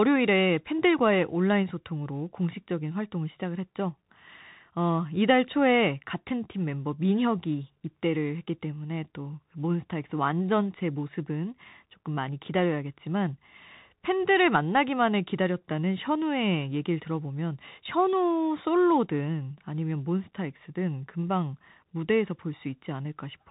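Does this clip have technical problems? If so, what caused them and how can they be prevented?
Yes. Throughout the speech, the Bluetooth CVSD headset codec is clearly audible. Nothing gets through above about 3.8 kHz. The coder sends a single up-or-down bit per sample, consistent with a 64 kbps link, and its adaptive step cannot keep up with loud, fast-changing sounds, so s sounds come out scratchy over a grainy hiss. A plain low-pass filter would cut the top just as hard but leave no grit. To prevent it, use a wideband headset mode or a wired microphone.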